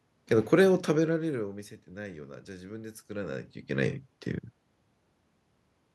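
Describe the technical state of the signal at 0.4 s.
At 0.4 s the speech signal is intact, with only the background noise of the room audible beneath it.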